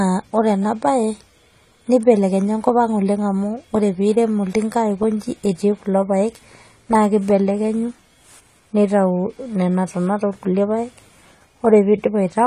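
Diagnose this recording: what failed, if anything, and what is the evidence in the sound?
The failure sits at the codec stage, and it runs through the whole speech clip. The sound is dull, with nothing above 14.1 kHz. Sibilants fizz and warble. This is likely AAC compression. The damage fits AAC-LC at roughly 32 kbps, starving bands of bits.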